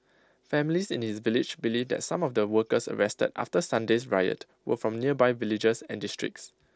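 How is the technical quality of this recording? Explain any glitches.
No glitches can be heard in this speech recording. It carries the sound of a Bluetooth mSBC headset link, with speech reaching up to about 8 kHz and a light grain on the louder sounds, as that wideband codec normally gives.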